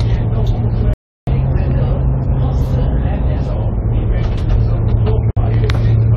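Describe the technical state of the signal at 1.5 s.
Catch-up at higher speed, running from 1.27 s to 3.52 s, is in effect at 1.5 s. Having fallen behind after a stall, the player resamples its buffered backlog so that it plays about 1.15 times faster to win back lost time. Because speed and pitch are tied together, the sound is both hurried and raised by roughly two semitones, then settles back to its normal rate and pitch once the span ends.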